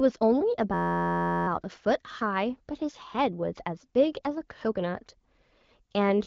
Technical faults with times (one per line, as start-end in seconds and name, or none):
0.74-1.47 system hang loop